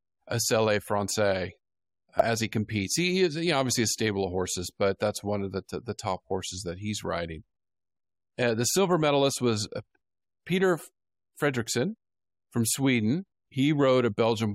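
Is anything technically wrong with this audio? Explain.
Yes. At about 2.20 s, just before "he competes", there is damaged data in the compressed stream. The decoder misread corrupt frame data and lost sync, producing a brief chirp or blip. On a spectrogram it appears as a thin broadband vertical smear, and on the waveform as a short irregular burst.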